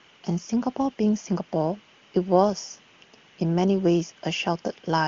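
No technical faults can be heard in this recording.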